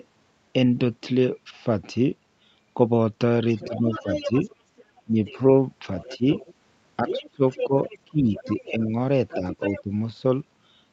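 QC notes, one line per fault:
3.56–5.37 s, 6.0–6.54 s, 7.07–8.71 s, 9.28–9.82 s: other side's voice leaking through. A second voice sits roughly 10 to 20 dB under the speech, likely echo the canceller missed. It appears as faint, overlapping harmonic stacks on the spectrogram.
3.64–4.33 s, 5.05–5.17 s, 6.17–6.22 s, 7.03–9.91 s: speech suppressed in double talk. The speech ducks by a few dB up to about 20 dB in short bites, likely the canceller damping both sides at once. The waveform shows notched, dipping envelopes.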